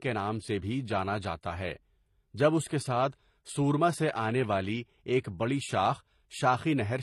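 Throughout the speech, nothing sounds above 12.8 kHz. Smeared, watery MP3-style artefacts are layered with thin, synthetic HE-AAC highs. The likely cause is transcoding between lossy codecs, which fits an MP3 near 57 kbit/s re-encoded to HE-AAC near 24 kbit/s.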